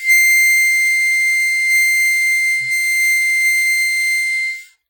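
Throughout, a low-bitrate transform codec has likely squeezed the music, which fits WMA compression at around 24 kbps. Quantisation noise smears across long blocks and faint detail is discarded, so the sound is heavily ringing and washy, with hiss that breathes with the music.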